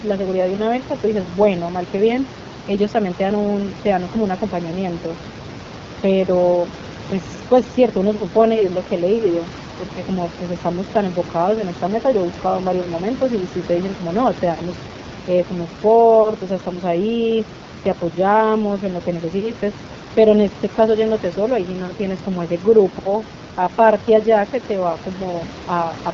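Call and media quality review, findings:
Rough, raspy speech for the full length; nothing above 7.2 kHz. Probable component: AMR wideband (HD Voice) codec, low-rate mode, sound consistent with 8.85 kbit/s. Too few bits for the pulse excitation, so the excitation is coarse and speech turns rough. Room noise sits about 16 dB under speech.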